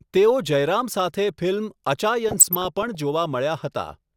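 From 2.29 s to 2.95 s the speech is overlaid with DAB burbling. Weak reception let bit errors, on the order of 0.2 percent, slip past error correction into the MP2 data, so corrupted samples put short noise blips into single sub-bands and corrupted scale factors make individual sub-bands leap in level for up to a frame, which fits roughly thirty damaged frames. Unlike a packet-loss dropout, the sound never goes silent; the bands flare erratically instead.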